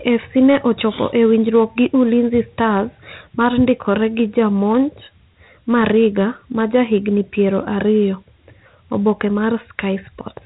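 The clip is speech, and it carries Dialogic VOX ADPCM damage from start to finish. Nothing is heard above about 3.9 kHz, which points to 8,000 samples a second and a 4-bit stream near 32 kbps. This OKI-style ADPCM codes each sample as a small step from a prediction, with coarse precision. Those rough steps leave a plainly audible gritty hiss that rides along with the speech. The cut-off top end makes it sound dull and phone-like.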